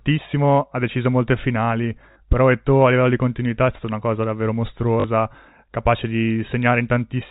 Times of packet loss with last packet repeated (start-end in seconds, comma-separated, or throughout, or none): 2.12-2.16, 5.00-5.04